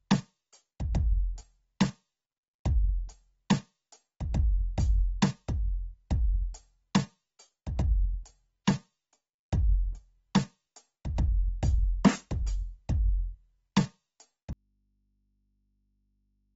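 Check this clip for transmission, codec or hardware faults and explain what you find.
Two faults are present: codec damage across the whole music clip, and a dropout that runs from 14.53 s to the end.

Throughout, the music shows the signs of AAC compression, likely AAC-LC at a low bitrate, which fits roughly 24 kbps. The encoder quantises its frequency lines coarsely against a hearing model and drops whatever it cannot afford. Here nothing sounds above 7.7 kHz, so the top end is dull. The damage is plainly audible as smearing and a warbling, fizzy grain on sustained tones.

At 14.53 s there is an audio dropout to a faint residue that lasts to the end of the clip. The music cuts off abruptly, with no fade, and the gap holds only hum some 45 dB below the music's level. This is likely a loss of the wanted signal while the input after the break stayed live, so the open input picks up mains hum instead.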